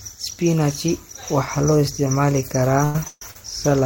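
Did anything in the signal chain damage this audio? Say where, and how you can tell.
Yes, in the network path near the end of the speech. Two call audio freezes occur, from 2.84 to 2.96 s and from 3.08 to 3.22 s. In each, the last sound continues as a fading buzz for about 0.10 s and 0.14 s respectively, and the second ends in about 10 ms of silence. The speech then resumes where it left off with nothing skipped, so the gap adds delay. The likely cause is packets held up in transit, leaving the jitter buffer empty while the receiver filled with stretched audio.

A short stall from a late packet follows at 3.31 to 3.36 s. One sound is held about 40 ms too long, with a slight buzz, before the speech continues from the same point with nothing lost. This is a single packet arriving after its playout time. The jitter buffer briefly ran dry, so the receiver extended the previous audio until the packet arrived, adding 40 ms of delay.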